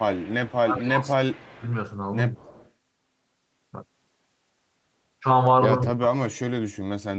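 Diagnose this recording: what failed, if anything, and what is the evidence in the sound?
Echo leak, at 0.00–0.58 s, 0.79–0.87 s, 1.48–1.67 s and 2.37–2.71 s, sits in the call processing stage. A faint delayed copy of the speech trails it by 222 ms, about 25 dB below the direct speech and about 30 dB down in the 1.48 s instance. The likely mechanism is a far-end loudspeaker feeding its microphone, with the echo canceller failing to subtract all of that pickup, so the residue was transmitted back into this 8 kHz-limited call audio.

Speech suppressed in double talk, again in call processing, appears at 0.63–1.64 s, 2.37–2.47 s and 5.89–6.59 s. The speech level sags by roughly 15 dB across about a second in the first span and by roughly 10 dB briefly in the second. In the last it drops by as much as roughly 40 dB across about 0.7 s. With both sides talking at once, the echo canceller likely could not tell the talker from echo and attenuated everything.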